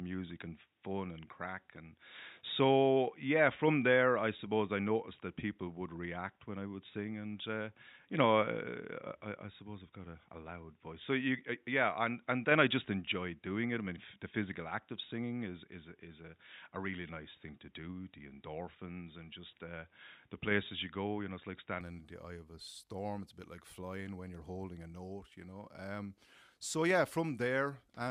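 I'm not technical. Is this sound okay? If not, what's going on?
No. Likely an input switched to a poorer device: until 21.8 s the speech sounds dull and boxy, then brightens abruptly at "in the eye of".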